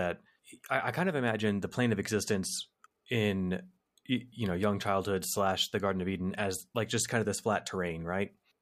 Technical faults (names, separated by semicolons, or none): none